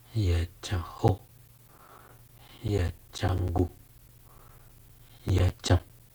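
From 0.98 s to 6.10 s the speech carries a steady ticking, ten clicks a second, every 0.1 s. These are periodic USB or driver dropouts: something stalls the audio path at a fixed interval, and around fifty times a roughly 10 ms slice is lost and replaced by silence.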